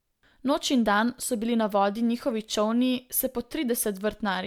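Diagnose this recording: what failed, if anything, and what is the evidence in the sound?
Nothing failed in this speech recording, and no stage from capture through to playback leaves an audible trace of trouble. With no fault evidence anywhere in the sound, there is no mechanism to explain.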